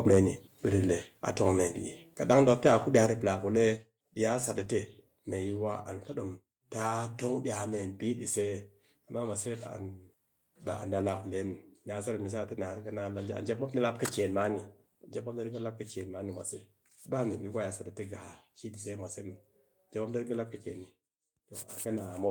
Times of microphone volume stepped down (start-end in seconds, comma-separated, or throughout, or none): 1.02, 2.04, 3.06, 4.08